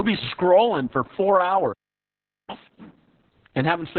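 Throughout, Opus voice compression at a very low rate leaves the speech narrowband, with nothing above about 4.3 kHz, and heavily damaged: muffled, hoarse and faintly robotic. Unlike a plain low-pass filter, it roughens the voice itself, which fits a bitrate near 6 kbps.

At 1.72 s, just after "be scrolling for four", a playback stall cuts the sound to silence for about 0.76 s, until 2.50 s. It is likely that the player ran short of data. The sound resumes where it left off, with nothing skipped.

From 2.50 s to 3.25 s, catch-up at higher speed follows. The backlog plays at twice normal speed, and the pitch rises by roughly ten semitones before settling back. This is faster playback, not a gap or a jump ahead, so nothing is skipped.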